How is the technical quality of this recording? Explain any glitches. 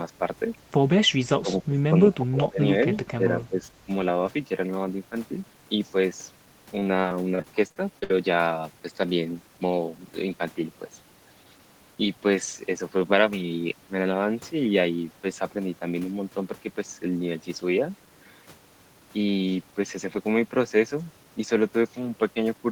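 The recording has two kinds of fault: three level dips early on, and a stretch of choppy, robotic sound a few seconds later.

Speech suppressed in double talk occurs at 1.4–1.82 s, 2.12–2.61 s and 3.17–3.74 s. In each span the speech level sinks noticeably and then recovers: by about 20 dB in the first two and about 10 dB in the third. The likely cause is an echo canceller failing to separate the near talker from the loudspeaker echo of simultaneous far-side talk and attenuating the near talker along with it. The result sounds like the voice being pushed back from the microphone in short bursts.

Repeated packet loss (robotic sound) runs from 6.79 to 8.11 s. Within those 1.3 seconds, audio repeatedly goes missing in short holes, the longest about 56 ms. Each hole is patched by stretching the preceding sound, and the next one arrives before the signal settles. The fill accounts for about 18% of the span. 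The patched fragments give the speech a choppy, mechanical texture with small pieces dropped out.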